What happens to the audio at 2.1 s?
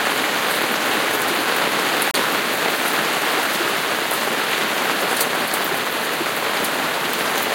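A gap between stream segments cuts in from 2.11 to 2.14 s. The time stamps of two adjoining segments fail to meet, so the player fills the 30 ms hole with silence. The sound stops abruptly and resumes with hard edges. Nothing is lost.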